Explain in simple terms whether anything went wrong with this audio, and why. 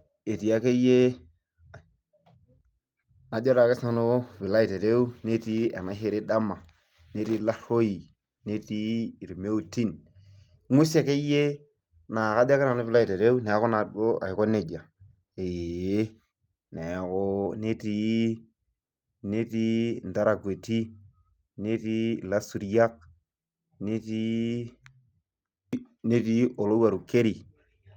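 Nothing went wrong here: the speech signal stays steady and intact throughout, with no dropouts, interruptions or added disturbances to be heard.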